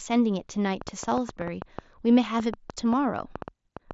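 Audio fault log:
0.82–3.93 s, train of clicks: around twenty similar sharp pops at an uneven pace of about 5.7 per second, heard through pauses too, likely interference or a faulty connection; the waveform shows narrow spikes standing roughly 10 dB above the signal, and the spectrogram shows thin vertical lines stopping near 7.7 kHz, the headset codec's ceiling.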